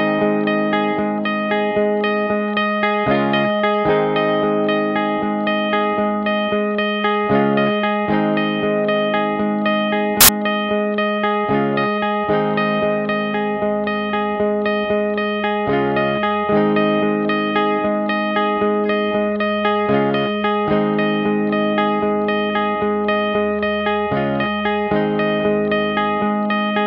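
At 10.21 s a burst of loud, harsh broadband noise replaces the sound for about 80 ms, ending at 10.29 s. These are samples built from the wrong bytes: the bytes in each sample were misassembled, so the rapidly changing low-order bits became the dominant part of each value.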